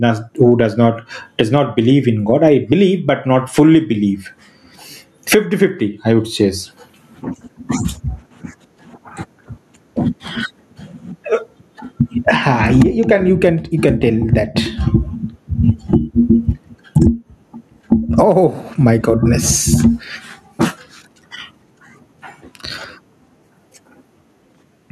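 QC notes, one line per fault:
throughout: gain pumping. Gain swings by about 25 dB under loud speech, squashing loud and soft parts closer in level, likely excessive gain driving a fast limiter.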